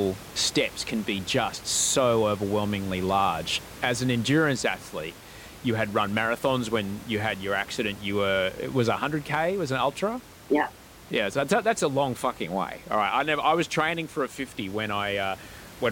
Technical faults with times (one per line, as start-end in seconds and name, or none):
none